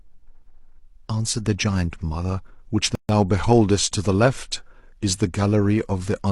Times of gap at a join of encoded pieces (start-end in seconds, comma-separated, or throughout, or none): 2.95-3.09